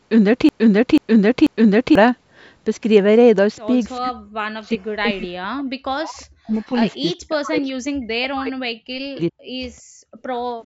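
A stall upstream, likely in the player, encoder or stream, left it resending the last fragment it held, so the clip opens already caught in a broken-record loop that runs until 1.95 s. A piece of about 0.49 s plays back to back, repeating three times with identical timing and content. Whatever speech belonged in those first two seconds never arrives.

From 3.98 s to 9.48 s, both ends of the call appear to have been talking at once. The echo canceller could not tell the near talker from the loudspeaker echo and pulled the microphone down, the likely cause of this speech suppressed in double talk. Across roughly three seconds of that stretch, the voice sinks or breaks off in fragments, at its worst about 40 dB down, so parts of the speech fall nearly silent rather than staying steady.

Near the end, the canceller clamped the microphone while the loudspeaker was playing, and the background is gated by the echo canceller twice. 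From 9.82 s to 10.23 s the room sound drops by about 34 dB and then comes back. A second drop of about 33 dB begins at 10.66 s and is still holding when the clip ends. The call's microphone processing leaves nothing above 8 kHz throughout, as expected for that path.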